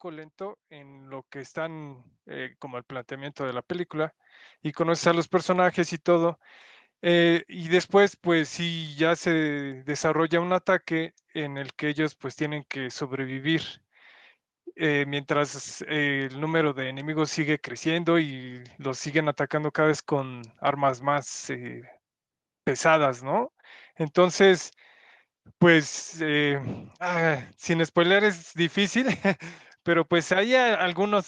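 Speech clip with an automatic gain rising fault from 0.05 to 5.24 s. The gain control judged the input too quiet and raised its gain by about 17 dB over those five seconds, so the voice and the background noise swell together. A speaker moving closer to the microphone would raise the voice much more than the room noise. The audio also passed through a call path whose top end stops near 12 kHz, which fits a super-wideband Opus setting.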